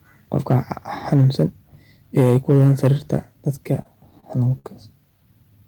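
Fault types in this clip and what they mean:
Microphone overload: The loudest syllables take on a harsh, crackling, gritty edge at 0.33 to 0.56 s, 1.12 to 1.43 s, and most heavily at 2.17 to 3.15 s, where the peaks run about 6 dB past the ceiling and roughly 7 percent of samples are flattened. The likely cause is input gain set too high, so the waveform's tops slam into the converter's limit and get sheared off, adding distortion.
Repeated stalls (stutter): Between 3.55 and 4.66 s the sound drags and hiccups. Eight brief holds stretch the audio by 168 ms in total, the longest lasting 59 ms, covering about 15 percent of that span, yet nothing is actually lost. Packets arrived late or too slowly, the jitter buffer kept running dry, and each time the receiver extended the last bit of sound until fresh data let playback continue.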